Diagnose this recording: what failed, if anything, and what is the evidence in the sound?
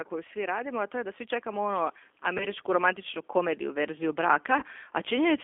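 The codec stage is the main culprit: the speech passed through a G.729 codec, which fits 8 kbit/s G.729A. Only about 300 Hz to 3.5 kHz survives, and the voice is rebuilt from a filter, a pitch predictor and sparse pulses, so it sounds plainly rough and synthetic.

In call processing, automatic gain rising slowly lifted the level by about 10 dB from 0.09 s to 5.39 s. The control judged the input too quiet and kept raising its gain, so the voice and the background swell together across almost the whole clip.

At the network stage, VoIP packet loss concealed by the speech codec occurs twice, at 2.38 to 2.46 s and at 4.58 to 4.64 s. The first gap of about 20 ms fits one lost packet and the second, about 40 ms, fits two. The decoder stretched its last pitch and filter into a fading buzzy tone or coloured noise, and the speech stays weak briefly afterwards.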